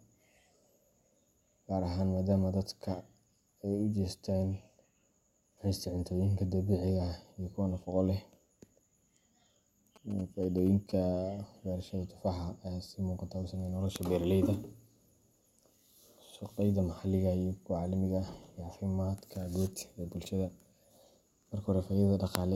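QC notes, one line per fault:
9.96–10.92 s, GSM signalling bursts: for just under a second, a galloping dit-dit-dit of short buzzes cuts across the speech at about 20 dB below it. The buzz repeats at 217 Hz, the frame rate of a 2G handset. A nearby phone is handling a call or text setup rather than carrying a call, so it sends only brief groups of radio bursts. The audio circuitry rectifies these bursts into this broken, rhythmic pattern.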